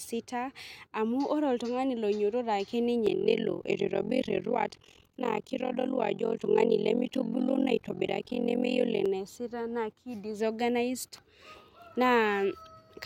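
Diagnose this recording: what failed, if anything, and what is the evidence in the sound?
The speech picks up an overlap-add ripple from about 3.07 s to 9.08 s, which puts the failure in a frame-based processing stage, most plausibly call processing. The level pumps up and down around 40 times a second, with a swing of about 60 dB, so it comes across as a harsh, robotic flutter. The frames are being windowed and stitched back together with an overlap whose windows don't add up to a flat gain, so every frame boundary dips.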